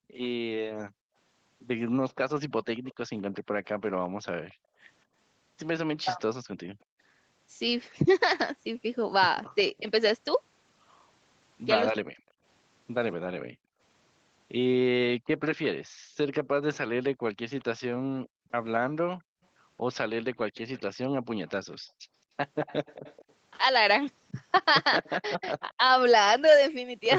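From 0.00 to 0.12 s the background is gated by the echo canceller: the room sound drops by about 35 dB for a moment. Only the ambience vanishes, not the talker, which sets it apart from double-talk suppression. The same gating returns from 4.09 to 6.99 s and from 13.41 to 16.17 s, dipping about 40 dB for roughly half a second and then under a second in total.

From 2.76 to 9.5 s an echo leak is heard, likely from a loudspeaker echo the canceller failed to remove: a faint copy of the speech trails 227 ms behind at about 30 dB down. A fixed delay separates it from room reverberation. It returns louder, about 25 dB down, from 15.54 s to the end.

From 5.86 to 12.19 s the speech is suppressed in double talk. The canceller likely mistook the talker for echo while both sides spoke, so the voice itself dips about 40 dB in pieces. It recurs, about 35 dB deep, from 25.17 s to the end.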